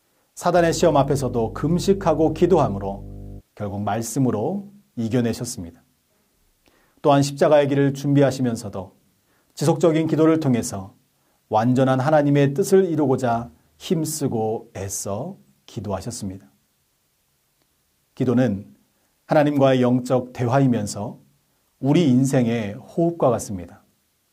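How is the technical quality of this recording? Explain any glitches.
The recording has one clear fault, mains hum near the start, running from 0.54 s to 3.42 s. A ground loop or a nearby transformer lets the 50 Hz power line leak into the signal path, adding a steady, low buzzing tone with a few low harmonics. It sits fairly high, roughly 15 dB below the sound. On a spectrogram it shows as a flat horizontal line at 50 Hz, with fainter lines at 100 and 150 Hz. In the waveform the quiet stretches carry a regular low-frequency ripple.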